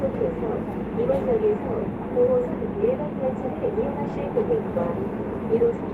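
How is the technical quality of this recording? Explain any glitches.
Nothing in this recording catches the ear as a glitch, so there's really nothing to explain.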